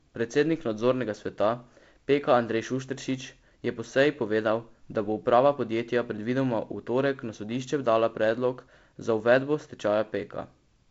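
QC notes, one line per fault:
No faults to note for QC, only the expected light hiss of G.722 wideband telephone coding at 48 kbit/s, with nothing above 7.7 kHz.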